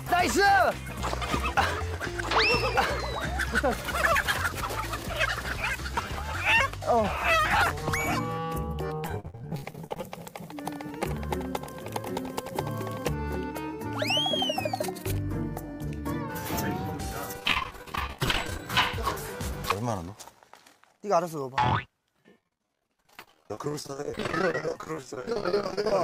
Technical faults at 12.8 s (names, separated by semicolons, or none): none